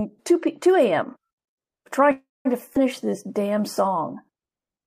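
At 2.11 s the speech stops and the last sound carries on as a fading buzz that ends in silence. About 0.19 s of that gap is dead quiet, and it resumes at 2.47 s. That's a call audio freeze, likely caused by packets stalling in transit until the jitter buffer ran dry, so the receiver stretched the last bit of sound to cover. Nothing's actually lost. It's roughly a third of a second wedged in, which pushes everything after it later by the same amount.

Right after, between 2.73 and 2.77 s, there's a skip ahead. The speech jumps forward with only a tiny bridge of about 18 ms, and roughly 70 ms of speech simply isn't there. Once the delayed audio piled up, a chunk was dropped, clawing back some of that lag, so the two sides of the cut butt together almost directly and you hear a small clipped lurch.

Then from 3.05 to 3.62 s you get a jitter buffer slow-down. The buffer was rebuilding its reserve by repeating single pitch periods over and over, adding about 64 ms in total. 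The speech runs at around 90 percent speed with the pitch unchanged, so sounds come out a little drawn-out and sluggish, as if the talker briefly dragged their feet.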